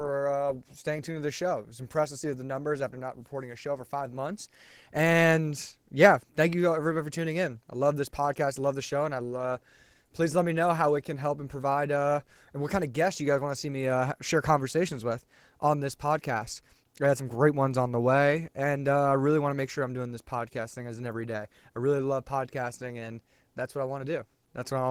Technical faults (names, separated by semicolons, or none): Opus voice compression